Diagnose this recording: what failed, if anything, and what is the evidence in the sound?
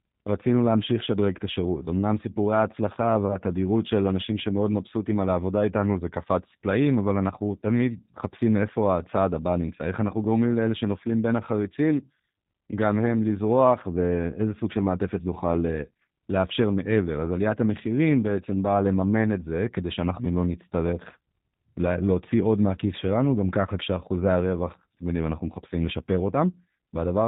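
G.729 codec damage runs through the whole speech recording, so the fault sits at the codec stage. Nothing reaches above 4 kHz, and the voice comes out slightly rough and synthetic, which fits G.729A at about 8 kbit/s. The codec does not pass the waveform itself. It resynthesises each 10 ms frame from a vocal tract filter, a pitch predictor and a handful of pulses per half-frame, and that coarse rebuild is plainly audible as a buzzy, processed edge.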